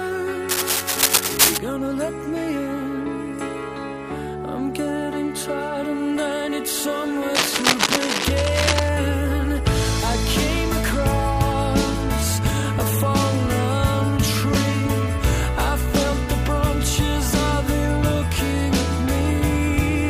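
Cable scratch noise appears from 0.49 to 1.59 s and again from 7.35 to 8.89 s: dense, uneven scratching and rustling laid over the audio at roughly the same loudness, likely from a worn cable or connector being moved so its contact resistance fluctuated rapidly.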